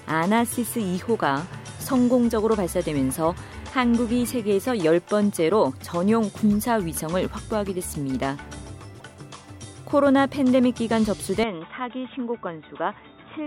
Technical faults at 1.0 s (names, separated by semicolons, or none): none